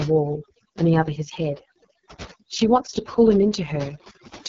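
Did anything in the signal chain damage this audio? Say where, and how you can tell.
Yes. At the call-processing stage, overdone noise removal runs throughout: the background drops and breaks up into twinkling specks. Unlike codec damage, this comes from bands being gated whenever they sit near the noise estimate, taking quiet speech detail along.

At the codec stage, the AMR wideband (HD Voice) codec is heavily damaging the speech throughout, making it rough and raspy, with nothing above 7.4 kHz. That rasp, rather than watery gating, points to the pulse-driven model starved of bits, which fits the 6.6 kbit/s mode.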